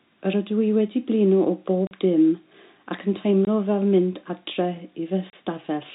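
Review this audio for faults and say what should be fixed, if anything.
Packet loss filled with silence breaks the speech three times: 1.87 to 1.91 s (40 ms), 3.45 to 3.47 s (20 ms) and 5.30 to 5.33 s (30 ms). Each hole starts and stops abruptly. Every gap is a multiple of 10 ms, which fits 10 ms packets going missing and being replaced with silence. Concealment would smear or repeat the preceding sound instead, and a level dropout would fade rather than cut. The band-limited G.711 telephone character is present across the whole clip, so the holes are not a coding artefact. Enabling packet loss concealment and a jitter buffer at the receiver would prevent it.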